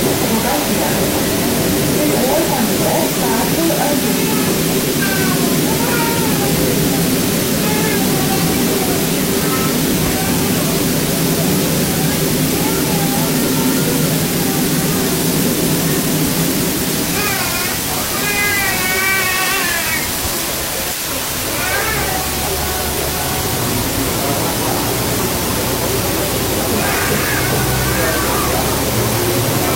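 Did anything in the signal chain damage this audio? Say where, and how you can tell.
Yes, at two stages. In sample-format conversion, the audio has been requantised to about 3 bits with dither. From start to end there is a steady, even hiss, roughly as loud as the programme itself, yet no grinding or distortion rides on the signal. Dither randomised the rounding error before truncation, so the coarse 3-bit steps turn into flat white noise, not harmonic distortion.

At the codec or storage stage, compressed frames were skipped. The audio jumps forward at 4.97, 7.94, 17.23, 19.18 and 29.59 s, losing roughly 0.7, 0.2, 0.2, 0.4 and 0.3 s respectively. Each join lasts about 50 ms. The decoder missed whole frames of about 46.4 ms, so the audio jumps ahead by the length of the frames left out.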